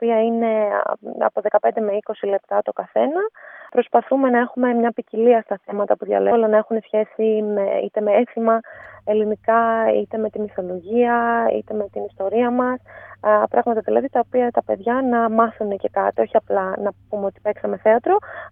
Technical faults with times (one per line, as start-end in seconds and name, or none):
6.31 skip ahead
6.41-8.50 jitter buffer speed-up